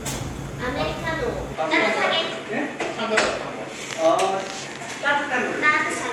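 At 1.55 s the input likely switched to a poorer device: the sound loses everything above 11.4 kHz, turns duller, and gains a faint new noise floor, with no gap.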